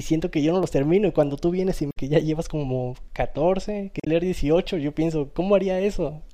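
Damaged data in the compressed stream hits this speech twice, from 1.89 to 1.97 s and from 3.97 to 4.07 s. The decoder misreads the corrupted frames and loses sync while hunting for the next valid header, so each spot becomes a brief chirp, squawk, click or short hole in the speech.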